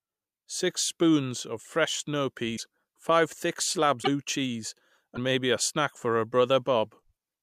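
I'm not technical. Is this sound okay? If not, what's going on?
No. Three brief garbled blips, at 2.56–2.60 s after "spoons of fresh snow", at 4.02–4.07 s after "five thick", and at 5.15–5.18 s before "maybe a snack", are likely a broken MP3 bit reservoir. Chunks of the file went missing, so the sound skips ahead and the next moment comes out as a chirp, a burst of noise or a short hole.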